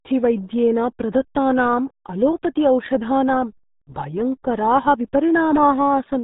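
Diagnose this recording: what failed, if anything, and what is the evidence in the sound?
The failure is at the codec stage: the whole speech recording has passed through the RealAudio 14.4 codec, and heavily. From start to finish nothing survives above 3.8 kHz, so sibilants and consonant edges are gone and the voice sounds muffled and gargly, with a watery smear on vowels, which fits an 8 kbit/s dial-up-era rate. On a spectrogram the energy stops at a flat ceiling near 3.8 kHz with blank space above, and the remaining harmonics look blotchy and coarsely quantised rather than smooth.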